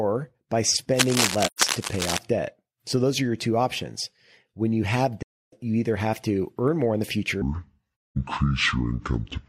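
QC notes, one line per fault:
0.94–2.18 s, cable scratch noise: dense, uneven scratching and rustling sits over the speech at roughly the same level as the speech. It is likely caused by a worn cable, connector or control being moved, so contact resistance jumps rapidly and injects irregular noise bursts.
1.45 s, 5.22 s and 8.03 s, AAC frame loss with muting: the speech fades out and back in over gaps of 128 ms, 299 ms and 213 ms, consistent with three, seven and five dropped frames. The second falls between "you have" and "you either have to". The decoder zeroes the missing spectra, and the overlapping windows smooth each edge into a soft-edged hole.
7.42–9.48 s, section at the wrong speed: after "earn more in the", playback drops to 0.586 times normal speed. Pitch falls by about 10 semitones along with the tempo, so the speech becomes deep and dragged. This is likely playback against the wrong clock.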